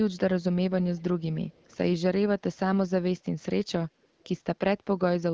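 At 0.83 to 1.03 s, 1.49 to 1.77 s and 4.03 to 4.28 s there's a faint echo leak: a very quiet copy of the speech trailing about 308 ms behind, likely from a speakerphone whose echo canceller let some pickup slip back.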